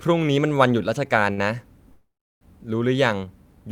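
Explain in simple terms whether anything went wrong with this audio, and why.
A short stall from a late packet comes at 1.33 to 1.39 s. One small chunk of the speech arrived late, so the receiver held the last sound for about 40 ms until it turned up, then carried on from the same place. Nothing is lost; the sound just lingers briefly.

A call audio freeze runs from 1.92 to 2.43 s. The speech stops, trails off, and falls to silence for about a third of a second before resuming exactly where it left off. Nothing is skipped, but roughly half a second of delay has been added. The likely cause is packets held up in transit, which left the receiver with nothing to play.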